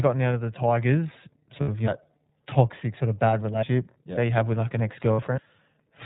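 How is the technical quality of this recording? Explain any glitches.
The quality is limited: it is narrowband iLBC-coded speech with two brief dropouts.

Throughout, the iLBC codec's damage is plainly audible. Each frame's excitation is coded on its own, which fits the 30 ms, 13.33 kbps mode. This gives a slightly rough, synthetic edge. A spectrogram shows a hard ceiling at 4 kHz with nothing above it.

At 1.61 s, just before "of you", and again at 5.13 s, there are lost iLBC frames. Each gap is about 60 ms, consistent with two 30 ms frames. The decoder repeats the last pitch cycle blended with noise, so the gap sounds like a held, buzzy vowel. On a waveform it appears as a short run of near-identical periods, and normal speech resumes immediately afterward.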